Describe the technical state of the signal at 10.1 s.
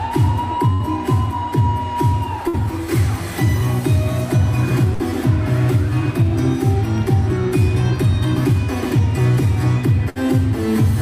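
At 10.1 s there is a burst of packet loss, running from about 10.09 to 10.18 s. A run of packets never arrived in time, so the receiver stretched the last sound it had for about 60 ms and faded it down. About 60 ms of the audio itself is simply gone. On a spectrogram the final frame smears sideways as flat, dimming bands; the waveform shows a repeating, shrinking pattern, then an abrupt restart.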